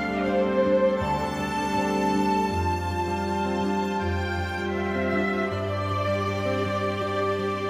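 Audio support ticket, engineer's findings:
No audible defects found on review; signal level, continuity and timing are stable throughout, with nothing to attribute to the capture, processing or transport chain.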